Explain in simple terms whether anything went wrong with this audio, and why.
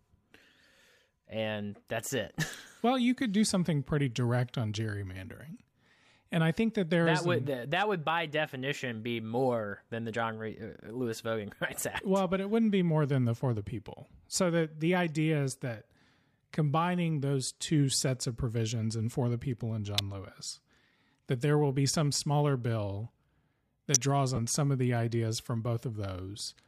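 Yes, a couple of things went wrong. Something nearby, likely a switch, motor or static discharge, sent a brief electrical arc into the audio line. That electrical switching spike is heard as a sharp snap laid over the speech at 2.54 s, at 19.99 s just after "for the people and", and at 23.95 s.

At 24.36 to 24.39 s, just before "some of the ideas", a short stretch of the Bluetooth LE Audio stream never arrived, a gap of about 20 ms that fits two lost frames. The decoder of the Bluetooth LC3 compression likely in use patched the hole by reusing the last sound it had, so these lost LE Audio frames are heard as a brief noisy smear in place of the voice.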